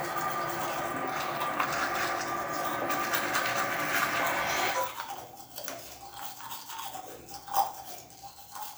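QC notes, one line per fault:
Faults: none detected.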